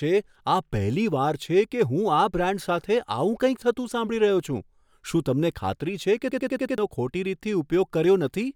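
At 6.32 s the speech locks into a system hang loop that lasts until 6.78 s. The driver or computer stalled, but the sound hardware kept replaying its ring buffer. One slice of about 93 ms repeats exactly, five times. That fits a 4096-sample buffer. At 10.8 repeats per second, it sounds like a rapid machine-gun stutter. When playback resumes, about half a second of the original speech is gone.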